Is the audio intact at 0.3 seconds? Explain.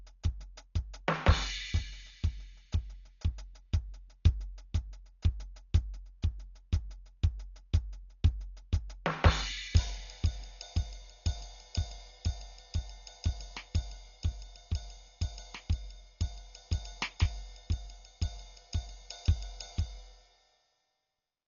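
No. At 0.3 s the music is already dull, with nothing above 7 kHz and rough dither noise fluttering around tones, likely Dolby Digital compression at about 40 kbps, replacing fine detail with noise.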